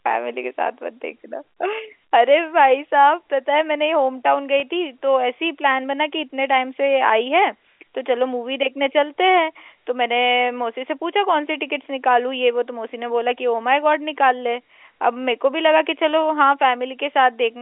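Speech carried over G.711 telephone coding lost what sounds like a single packet at 4.60 to 4.62 s, about 20 ms, and the receiver covered it with packet loss with pitch repetition, looping the last pitch period so the gap comes out as a brief, slightly held, buzzy tone rather than a dropout.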